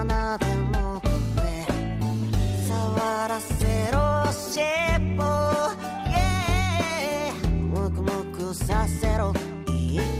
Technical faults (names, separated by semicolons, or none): call bitrate drop